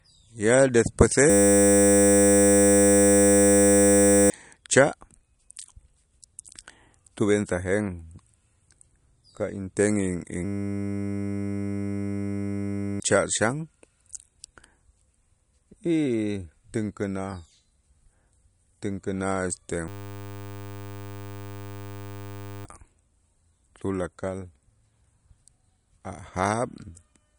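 From the start, the speech has a watery, swirling texture, and nothing sounds above 11.2 kHz. Weak frequency detail flickers in and out between frames. S sounds turn metallic and chirpy, and attacks smear. The hard treble ceiling and this swirl point to MP3 compression, likely at a low bitrate around 48 kbps. The encoder ran short of bits. It cut the top of the spectrum and dropped quieter components.

At 1.3 s the audio stops moving forward and becomes a steady buzz until 4.3 s. The same thing happens from 10.45 to 13.0 s and from 19.88 to 22.65 s. Each is a system hang loop. The computer or driver froze while the sound hardware kept replaying one 10 ms buffer. That short repeat produces a 100 Hz drone. Each freeze replaces about three seconds of the speech.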